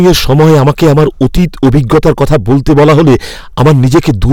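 From start to finish the speech is affected by hard clipping. The signal reaches the converter or processing stage at about 13 dB more than it can pass, so every peak is sliced off flat, and roughly a sixth of all samples were cut off at that stage's limit. Those squared-off tops generate strong high harmonics, which turn every louder syllable into a harsh, buzzing fuzz rather than occasional crackle.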